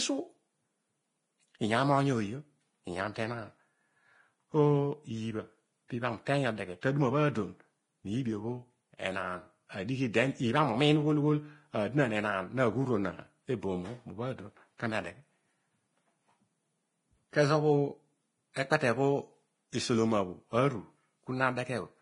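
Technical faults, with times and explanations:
Throughout: Vorbis compression, likely from a low bitrate near 28 kbps. Heavy grainy hiss, roughened speech tones and nothing above 10.6 kHz; unlike steady background noise, the hiss tracks the signal.
6.81 s and 18.54–18.56 s: pre-echo. A brief hiss, 19 and 24 ms long, comes just before sharp attacks as block-wide quantisation noise spills ahead of the onset, not after it like reverb.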